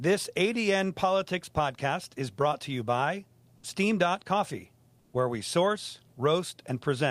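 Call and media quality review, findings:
Comfort noise in place of the background, 4.99–5.13 s: sender likely paused transmission in a speech gap (DTX, consistent with Opus). Real background replaced by smoother synthetic noise, about 3 dB quieter.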